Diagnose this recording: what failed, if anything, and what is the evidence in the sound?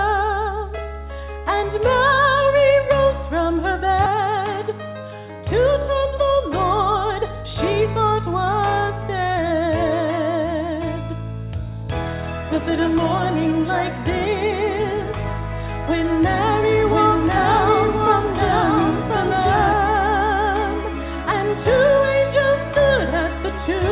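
At 4.06 to 4.08 s the sound jumps abruptly forward with no gap, losing roughly three quarters of a second: a skip ahead, where the network or jitter buffer discarded audio already queued.

From 4.15 to 5.08 s the sound runs about 9% fast, and from 6.05 to 7.44 s about 5% fast, with pitch unchanged. This is a jitter buffer speed-up, trimming pitch-period slices to shed excess delay.

Between 16.6 and 19.7 s a second full-band copy trails about a second behind, roughly 5 dB quieter, with abrupt start and end and no room colour. This doubled audio track likely comes from a second, slower capture path mixed in, on top of the G.711 call path's band limit at 4 kHz.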